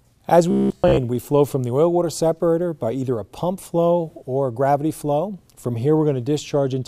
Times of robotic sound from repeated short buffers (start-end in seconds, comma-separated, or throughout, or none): 0.51-0.99